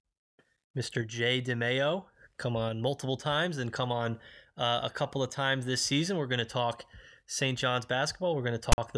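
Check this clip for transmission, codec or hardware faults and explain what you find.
One fault appears near the end of the speech. File tags played as audio, 8.72 to 8.78 s: a block of text tags was read as samples, giving a hard-edged, lopsided rasp of static, then silence from zero padding.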